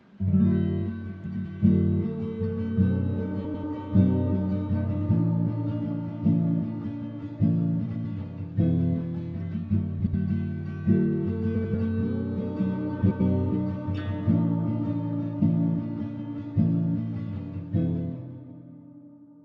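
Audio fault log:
1.26–1.46 s, 3.44–3.64 s, 7.85–8.05 s, 9.99–10.14 s, 11.55–11.75 s, 13.01–13.21 s: frames out of order. Two neighbouring blocks of about 93 ms each (70 ms at 9.99 s) play with their order swapped. This produces a brief garbled flutter. Unlike a dropout or skip, no sound is missing and the timing stays intact.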